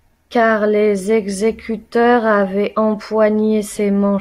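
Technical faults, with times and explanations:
No technical faults are present in this speech recording.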